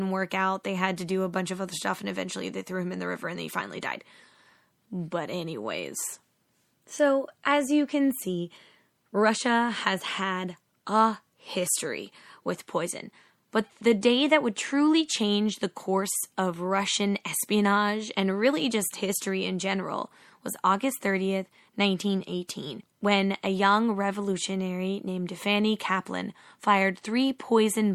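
Throughout the speech, s sounds turn watery and swirly, likely MP3 compression at about 64 kbps; a spectrogram shows flickering bins.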